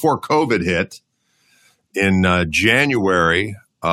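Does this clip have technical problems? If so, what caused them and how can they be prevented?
No, the speech signal is technically sound throughout, with nothing that needs diagnosing or preventing.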